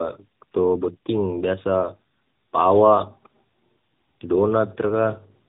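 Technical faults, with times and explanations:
Throughout, tandem speech coding: two AMR-NB passes joined through G.711 recode already-degraded speech, sounding rougher and more warbly than one codec, with nothing above 3.8 kHz.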